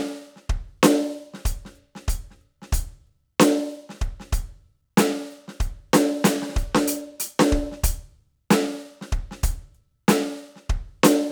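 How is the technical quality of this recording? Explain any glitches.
The technical quality of this music recording holds up, with no glitches to explain.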